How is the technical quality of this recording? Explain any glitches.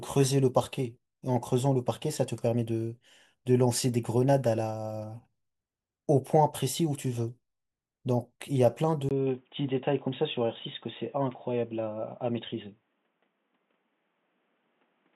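The recording has one clear glitch. At 9.09 s the speech turns dull and boxy for the remainder of the clip, after a gap of about 20 ms. From there on nothing above 3.8 kHz comes through, and a faint new background noise appears, roughly 45 dB below the speech, while loudness stays about the same. This is likely an input switched to a poorer device, such as another microphone or a headset's call profile, whose narrower band and own noise floor replace the original path.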